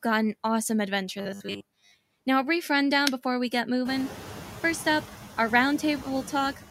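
Noise suppressor artifacts run through the whole clip. The processor pulls steady background down by about 7 dB frame by frame, so the residue pumps around the speech. On a spectrogram the noise floor shows blotchy, flickering patches that thin between words. After about 4.0 s, real room noise rises by about 19 dB, sitting about 16 dB below the speech.

From 1.19 to 1.97 s the speech turns into a rigid, metallic buzz at 100 Hz. This is likely robotic sound from repeated short buffers, where a roughly 10 ms chunk is replayed in place of most of the real audio. The spectrogram shows evenly spaced 100 Hz harmonic stripes, and the waveform shows identical repeating cycles.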